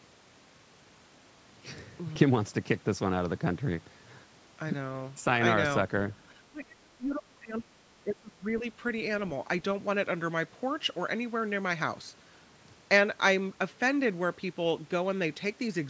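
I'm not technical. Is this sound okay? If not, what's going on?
No. Between 6.31 and 8.64 seconds the speech sinks right down, turning muffled and patchy for about two seconds. That's speech suppressed in double talk: both sides likely talked at once, and the call's echo cancelling mistook this voice for echo and squashed it.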